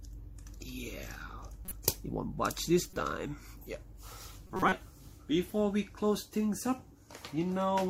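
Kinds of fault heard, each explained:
corrupt frame decoded: flipped bits in compressed frames were decoded anyway, putting energy at wrong frequencies; two brief glitches, then a longer, louder one.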